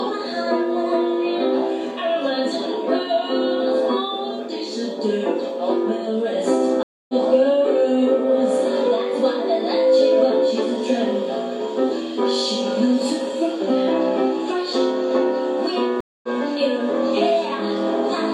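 At 6.83 to 7.14 s and again at 16.00 to 16.28 s, a stream reconnect breaks the audio: silence of 258 ms, then 227 ms, while a fresh decoder starts. Unlike a plain dropout, the sound resumes about a third, then a fifth, of a second further on.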